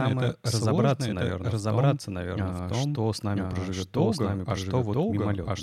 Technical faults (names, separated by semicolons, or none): doubled audio track